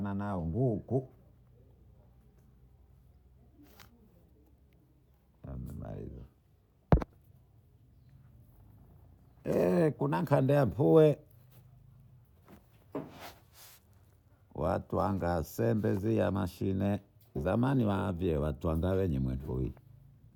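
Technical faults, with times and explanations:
Nothing here needs flagging, since this speech recording comes across without any technical faults to point to.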